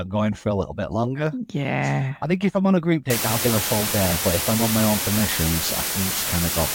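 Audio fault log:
3.10–6.74 s, low bit depth with dither: from just after "I'm on a group" to the end, the speech is held to 3 bits, with dither noise added before each sample is rounded to the nearest of so few levels. The dither turns the rounding error into a constant, even hiss instead of distortion, here roughly as loud as the speech. On a spectrogram, a flat broadband noise floor fills every frequency from 3.10 s onward. On the waveform, a thick band of noise surrounds the speech.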